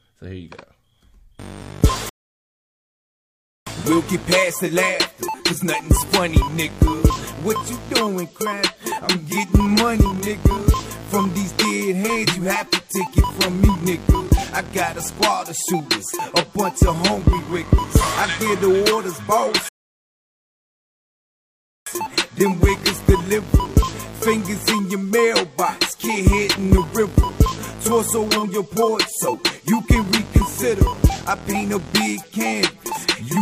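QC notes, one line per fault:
2.09–3.67 s and 19.69–21.87 s, rebuffering stall: the sound drops to silence for about 1.6 s and then 2.2 s, then picks up at the exact point it left off. The player exhausted its downloaded audio and waited for more, so nothing is skipped but playback runs longer.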